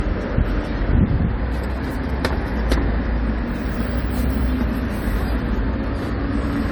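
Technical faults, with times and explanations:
Throughout, generation loss: swirly, hollow, smeared sound with blurred attacks, likely from roughly four AAC-LC re-encodes near 96 kbit/s, each pass piling on fresh quantisation noise.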